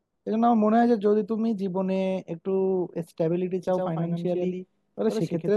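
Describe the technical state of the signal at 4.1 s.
At 4.1 s a doubled audio track is present, running from 3.68 s to the end: a copy about 5 dB quieter trails by roughly a tenth of a second, likely from a second, slower capture path, and shows on the spectrogram as every speech feature repeated just afterward.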